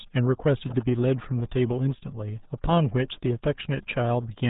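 From start to finish the speech sounds muffled and gargly, as if heard down an old dial-up line, with a watery, bubbling smear over every syllable and nothing above about 3.8 kHz. This is RealAudio 14.4 codec damage, and it is heavy. The codec throws away the upper band entirely and rebuilds the rest from a coarse model of the voice, which fits the 8 kbit/s budget of RealAudio 1 and leaves the gargle behind.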